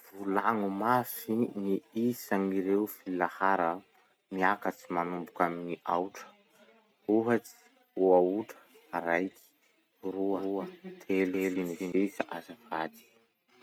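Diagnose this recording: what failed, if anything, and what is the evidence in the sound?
A doubled audio track appears from 10.34 s to 11.92 s. The speech is joined by a second full-band copy trailing it by around 200 ms, at roughly the same level, with no decay or room colour, and it switches on and off abruptly at those edges. The likely cause is a routing fault at the driver or buffer stage, where the same input was captured twice through a slower path and summed back in.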